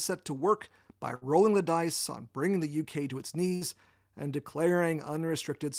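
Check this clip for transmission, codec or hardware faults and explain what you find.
Two bursts of packet loss break up the speech. Each time, a run of packets carrying 60 ms of audio was lost or arrived too late, so the receiver extended the last sound and faded it. The first, at 1.15 to 1.24 s after "to work by", fills 59 ms before "the dice on bringing". The second, at 3.55 to 3.64 s after "to its", fills 56 ms. Each is a brief held buzz or fading hiss with speech skipped.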